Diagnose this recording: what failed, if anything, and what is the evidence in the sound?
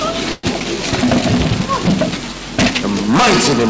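Hard clipping runs through the whole clip, introduced at a gain or sample-format stage ahead of the G.722 call codec. The signal is overdriven by about 29 dB, so roughly a sixth of the samples hit the ceiling and are cut flat. The result is a constant harsh fuzz on every loud passage rather than occasional crackle on peaks. The distortion harmonics stop at the codec's 8 kHz limit.

A call audio freeze occurs from 0.32 to 0.45 s, likely a jitter-buffer underrun on the network side. The last sound is stretched as a fading buzz, with about 30 ms of near-silence at the end. The audio then resumes where it stopped, about 115 ms late. Nothing is skipped, which is what separates this from packet loss.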